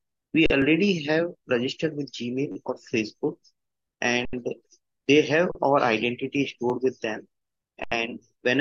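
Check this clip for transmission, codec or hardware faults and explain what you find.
There are three kinds of fault here, all playback or decode glitches rather than anything wrong in the recording itself.

Underrun with held sample at 0.46 s (40 ms), 4.25 s (80 ms), 5.52 s (35 ms) and 7.84 s (80 ms): the output buffer ran dry and the converter held its last value. The sound flattens into a brief dead spot, then picks up where it left off.

Repeated buffer at 0.62 s (one extra play), 2.52 to 2.56 s (four extra plays) and 6.70 s (one extra play): fresh data arrived late, so the same roughly 10.7 ms chunk replayed, which fits a 512-sample buffer. It's a quick repeat of the same short piece, with a hard join at each repeat.

Damaged data in a compressed stream at 2.68 s: the decoder hit corrupt frames and lost sync for a moment, which gives a short glitch.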